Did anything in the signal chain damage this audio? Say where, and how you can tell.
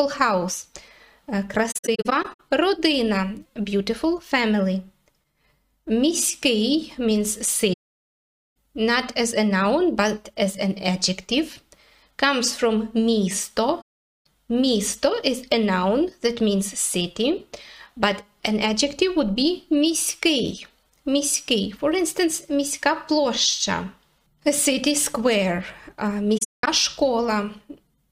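Yes. There is AAC frame loss with muting at the codec stage. Soft-edged holes occur at 1.71–2.40, 7.73–8.56, 13.81–14.26 and 26.37–26.68 s. Lost frames decode silent, and overlapping windows fade the edges.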